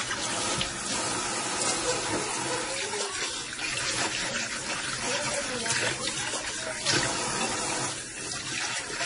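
Throughout, the sound has nothing above 10.6 kHz and a watery, swirling texture, likely from heavy MP3 compression at a bitrate near 32 kbps.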